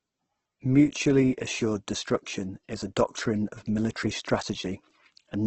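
A speech clip with heavy Opus compression damage throughout, most likely from Opus in its CELT music mode at a low rate near 12 kbps. Nothing reaches above 8.2 kHz, and the voice turns grainy and rough rather than swirly, which sets it apart from MP3 damage.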